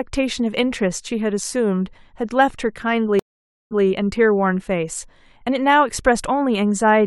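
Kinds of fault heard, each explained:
Stream reconnect: at 3.19 to 3.85 s the speech drops out for about 0.52 s. The connection broke and the player went silent, then reconnected and started a fresh decoder partway through the stream. The server resent a burst of audio, so when the speech returns it picks up about 0.14 s earlier than where it cut off, and that short stretch is heard twice. The restarted decoder's first frame or so comes in muted or faded in.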